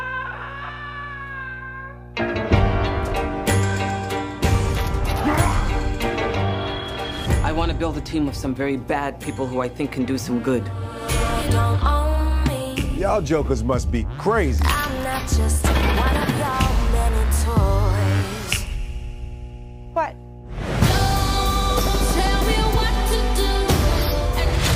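From start to finish, mains hum sits under the sound: a steady 60 Hz tone with some low harmonics, roughly 20 dB below the signal, coupled in from the power line. Unlike rumble or handling noise, it holds one fixed pitch and never drifts or thumps.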